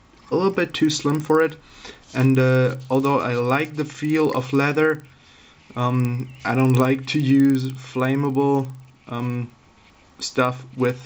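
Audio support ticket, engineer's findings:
Regular ticking at 20 per second, present throughout and only while signal plays, close to a low buzz. Probable component: 16 kHz to 48 kHz converter. Resampler restarted on every block (50 ms); each edge interpolated without true neighbours, leaving a small error.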